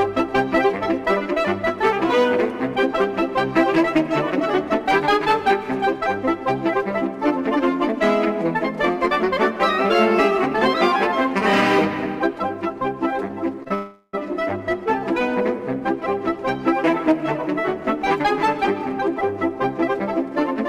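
From 13.13 to 13.72 s the audio catches and drags five times, the longest hold lasting 30 ms and 89 ms in all, about 15% of that stretch. This is a repeated stall, or stutter: packets reached the receiver late or more slowly than playback consumed them, so the jitter buffer kept emptying and the last sound was continued each time to cover the wait. Nothing is lost; the sound is just stretched by those pauses.

Right after, from 13.74 to 14.15 s, the sound hangs for 389 ms, held on as a continuation of what came before rather than dropping to silence, and then resumes exactly where it left off. This call audio freeze is likely the result of packets held up in transit until the jitter buffer ran dry. The added hold shifts everything after it 389 ms later, while nothing is missing.

From 18.26 s to the end at about 20.69 s, the audio runs at 104% speed with its pitch unchanged. This is a jitter buffer speed-up: with more audio queued than the buffer's target, the receiver trimmed many short slices of one or a few pitch periods to shed the backlog, about a tenth of a second in total. 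At this rate the quickening stays just below where it would start to sound hurried.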